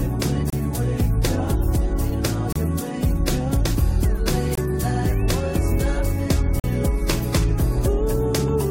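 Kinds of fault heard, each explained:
Gap between stream segments: the timestamps of consecutive 2-second segments leave small holes that playback fills with silence, giving hard-edged breaks of 23 to 43 ms near 0.5, 2.5, 4.6 and 6.6 s. Unlike a dropout, no audio is lost, and it resumes exactly where it stopped.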